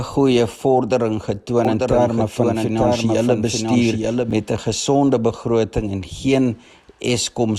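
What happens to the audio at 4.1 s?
A doubled audio track is running at 4.1 s, within a span from 1.65 to 4.31 s. The same sound is heard twice: a second full-band copy trails the original by about a second, around 5 dB quieter, with no decay or room colour of its own. The likely cause is a slower capture path picking up the signal again, or an edit leaving two copies out of step. The echo cuts in and out abruptly at the span's ends.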